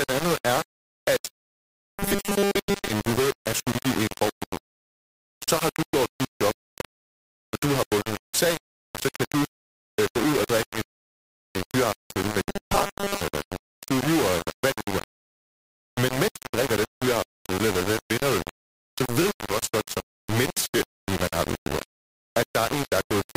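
A speech recording with heavy, grainy distortion running through the entire clip. The low bit depth without dither is likely the cause: the signal sounds as if quantized to only 3 bits with plain rounding, so the error tracks the waveform instead of sitting underneath it as steady hiss. The quantization error sits close to the level of the speech itself, making every syllable coarse and crunchy, while the quietest stretches collapse to silence or sputter between adjacent steps. On top of this, robotic sound from repeated short buffers appears twice: from 1.62 to 2.90 s, between "andet er at" and "du ved er skyldig", and from 12.50 to 13.21 s, just after "øh fyraftensøl med". In both spans the speech becomes a rigid metallic buzz at 200 Hz, which fits a 5 ms chunk being looped while most of the real audio is skipped, likely because fresh audio was arriving too seldom.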